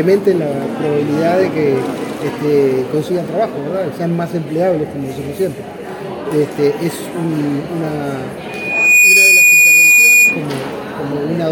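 At 8.48 s a loudspeaker feedback squeal kicks in: a single tone at 2.4 kHz swells up over roughly half a second and ends up sitting around 10 dB above the rest of the sound, hanging there until it cuts off at 10.45 s. What's happened is the mic is hearing the speaker it feeds, and at that one frequency the loop gain went past one, so the tone kept feeding itself and climbing.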